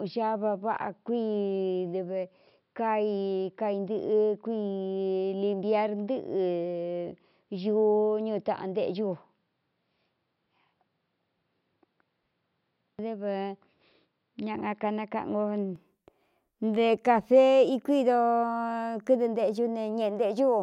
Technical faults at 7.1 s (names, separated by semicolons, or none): input switched to a poorer device